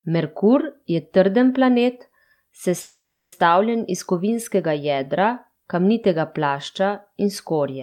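A speech recording with a call audio freeze from 2.81 to 3.34 s: the sound stalls, the last fragment smears into a fading buzz that drops to silence for roughly the final 0.32 s, and then the speech resumes exactly where it broke off, with nothing skipped. The likely cause is packets held up in transit, draining the jitter buffer so the receiver stretched out the last audio, inserting about 510 ms of filler and pushing everything after it later by that amount.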